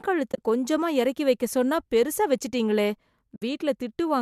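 Soft-edged dropouts open at 0.32 to 0.38 s, as short gaps with runs of a few tens of milliseconds, and again at 3.36 to 3.42 s, each losing about 60 ms. This is AAC frame loss with muting: missing frames were zeroed, with overlapping windows fading the sound out and back, likely through low-delay AAC compression.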